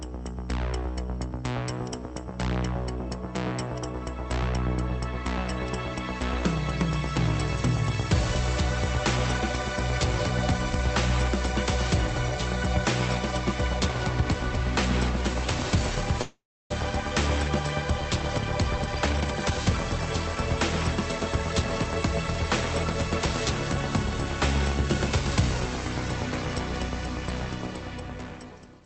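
At 16.21 s the sound stops flowing for about half a second, until 16.72 s: a call audio freeze, likely from packets held up in transit so the jitter buffer ran dry. The last sound is stretched into a fading buzz or hiss, then roughly 0.31 s of silence, and playback resumes where it stopped, so about 0.49 s is inserted with nothing lost.

Then comes a jitter buffer speed-up, repeatedly cutting pitch-period-sized pieces. From 18.78 to 19.58 s the audio runs at about 144% speed, roughly 0.4 s removed, and sounds rushed at unchanged pitch. A milder pass, around 109% from 27.61 to 28.82 s, trims roughly a tenth of a second. Across the clip the call codec's top end stops near 8 kHz, consistent with Opus at a moderate bitrate.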